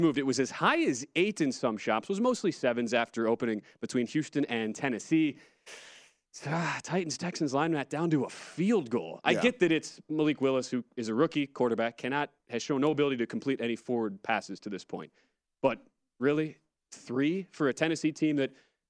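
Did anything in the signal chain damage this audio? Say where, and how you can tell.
No, nothing in this speech recording stood out on listening as damage from any stage of the signal chain.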